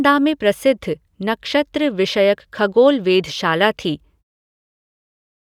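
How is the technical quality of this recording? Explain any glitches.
No glitches can be heard in this speech recording.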